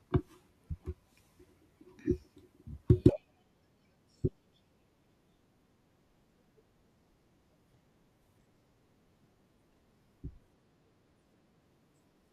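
Speech, with channel delay (comb filtering) from 10.25 to 11.62 s. One channel lags by roughly a single sample before the mono sum, putting the first cancellation notch near 20 kHz. The result is a dulling of the top end, and it is confined to this stretch.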